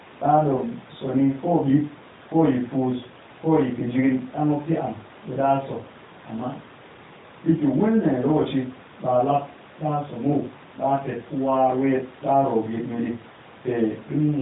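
From 0.58 to 0.63 s, a lost AMR speech frame: the decoder filled the 20 ms gap with repeated, quieter settings, causing a brief dip in the speech.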